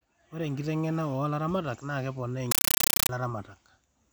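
At 2.51 s the speech is replaced by a compressed stream played as audio, lasting until 3.09 s. A Dolby Digital (AC-3) bitstream reached the output undecoded, and its data was treated as ordinary samples. Each frame becomes an 8 ms burst of harsh noise, then silence from the zero padding. The bursts repeat 31.25 times a second. The result is very loud, chattering static. The burst density fits a 384 kbps stream.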